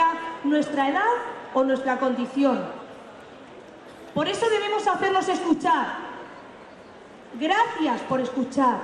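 No dropouts, distortion, noise bursts or timing errors turn up anywhere in the audio.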